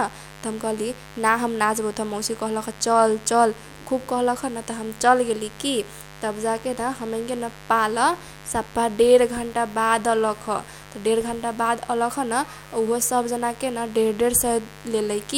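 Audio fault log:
Throughout, mains buzz: a steady, raspy buzz sits about 20 dB under the speech. Switching spikes at 50 Hz mains spread harmonics up to several kHz.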